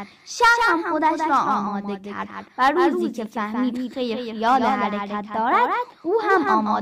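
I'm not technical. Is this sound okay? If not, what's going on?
No. The whole clip has a doubled audio track. A second copy of the speech trails about a fifth of a second behind, only a little quieter. It sounds like a flat, sudden echo. The likely cause is the same sound being recorded twice.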